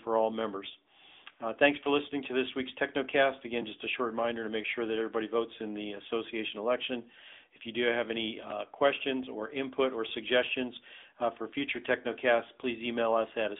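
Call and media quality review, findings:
AMR narrowband mobile codec (AMR-NB) on the call path, entire clip. Speech squeezed through an 8 kHz mobile vocal-tract coder, at a rate consistent with the 10.2 kbps mode. Band limited to about 250 Hz to 3.6 kHz, nothing above 3.7 kHz. Codec damage plainly audible in the voice.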